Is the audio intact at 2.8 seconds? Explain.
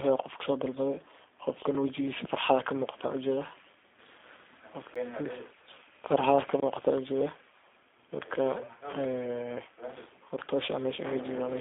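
No. The G.729 codec colours the whole clip: speech rebuilt from a few pulses sounds rough and synthetic, not merely band-limited, with nothing above 3.7 kHz.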